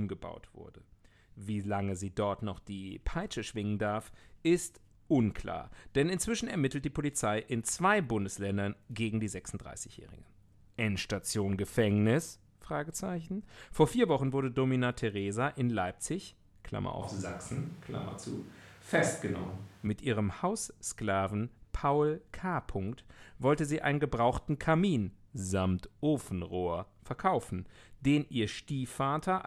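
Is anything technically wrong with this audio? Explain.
Yes. From 17.02 to 19.87 s the speech abruptly turns roomy and hollow, thinner in the bass, with a bed of room noise roughly 25 dB below the voice, then snaps back just as suddenly. This is a switch to a distant microphone, most likely because the close mic's signal dropped out and a farther pickup filled in. The overall level stays about the same, so the waveform envelope barely changes. A spectrogram shows thinned low frequencies, smeared reverberant tails, and a raised noise floor between clean vertical edges at both switch points.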